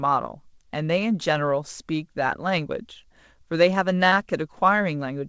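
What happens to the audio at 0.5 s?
At 0.5 s the speech continues intact, with no dropout, glitch or other fault at that moment.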